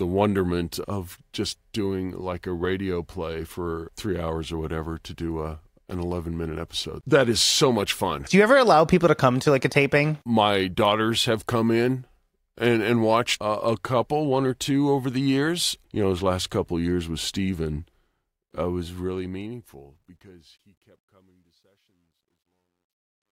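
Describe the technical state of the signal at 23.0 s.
At 23.0 s you're in the worst stretch of the truncation distortion on the fade-out, which runs from 18.49 s to the end and is harshest from 20.58 s. The undithered fade fits a 12-bit stage, so the quiet speech turns gritty.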